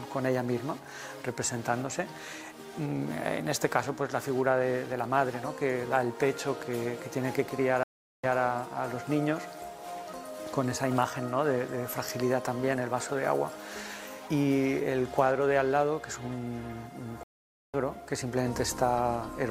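A stream reconnect occurs at 7.83 s and again at 17.23 s. Each time the connection dropped, the player fell silent, then reconnected and started a fresh decoder partway through the stream. At 7.83 s the gap lasts about 0.4 s, and the audio resumes 160 ms earlier than where it stopped, so a short stretch repeats. At 17.23 s the silence runs 0.5 s, and playback picks up roughly half a second later, skipping material.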